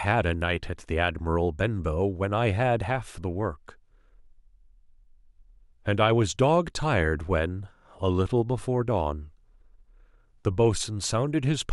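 No technical faults are audible.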